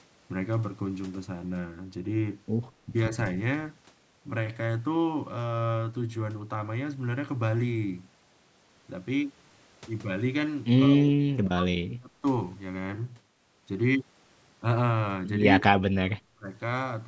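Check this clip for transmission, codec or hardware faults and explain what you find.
Yes, there are two call-path problems, and they show up together twice.

Speech suppressed in double talk: from 10.9 to 12.24 s and 15.6 to 16.49 s the speech dips by up to about 30 to 40 dB in patches, likely an echo canceller ducking while both sides talked.

Echo leak: at 10.99 to 11.03 s and 15.67 to 15.72 s there's a faint copy 183 ms late, roughly 20 to 30 dB down, likely loudspeaker echo slipping past the canceller.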